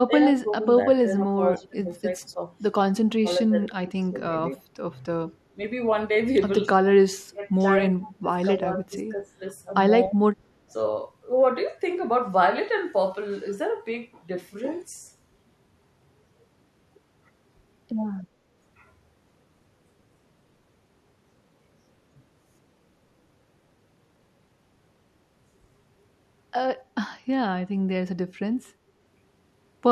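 The speech dips repeatedly in roughly the first ten seconds: 0.06–0.67, 1.04–2.5, 3.21–4.19, 5.55, 7.31–9.41 and 10.09–10.18 s. Drops reach about 20 dB. This is likely speech suppressed in double talk, where an echo canceller mistook overlapping speech for echo.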